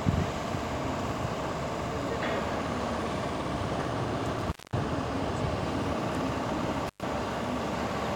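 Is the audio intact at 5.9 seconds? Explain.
Yes, the audio is intact at 5.9 seconds, with no fault audible at that point.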